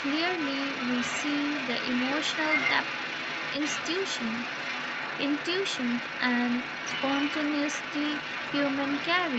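From 0 s to 9.4 s, the other side's voice leaking through sits under the speech at about 5 dB below the talker. The second voice is likely far-end audio from the loudspeaker that the echo canceller failed to remove, not a bystander in the room.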